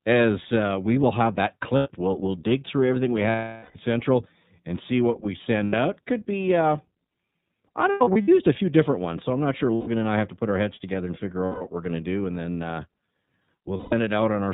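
A speech clip carried through the iLBC codec, with audible codec damage throughout. Nothing above 4 kHz survives, so the voice sounds thin and narrowband. Its texture is slightly rough and synthetic. That character fits iLBC at 13.33 kbps with 30 ms frames. Each frame's excitation is coded on its own, which costs some smoothness.

There are also seven bursts of lost iLBC frames. During each one, the decoder repeats the last pitch cycle mixed with noise. The result is a held, buzzy vowel in place of the missing audio. Gaps occur at 1.77 s (90 ms) and at 3.30 s after "dig through everything we". That second gap runs 450 ms, long enough for the fill to fade. The next comes at 5.64 s after "and see what we" (90 ms). At 7.92 to 8.29 s there are scattered losses totalling 210 ms, the longest run about 100 ms. At 9.75 s there is a 120 ms gap between "so I'm not sure" and "and I have to". The last two fall at 11.46 s and 13.77 s, 150 ms each. 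Speech recovers almost instantly after each gap.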